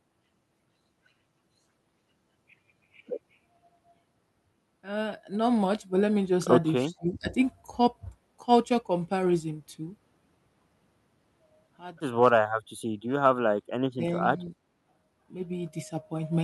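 Speech suppressed in double talk at 6.88–7.3, 12.54–12.75, 13.94–14.16 and 14.38–14.53 s in this speech recording: the level drops by about 5 to 30 dB, likely because an echo canceller treated overlapping far-end talk as echo and turned both down.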